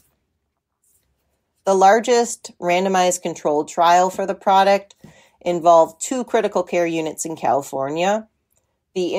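A speech recording, with nothing technically wrong with it.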